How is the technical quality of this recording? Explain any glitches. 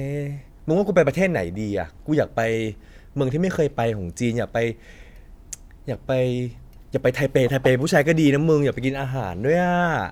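No technical glitches can be heard anywhere in the recording. Nothing in this speech audio calls for an explanation.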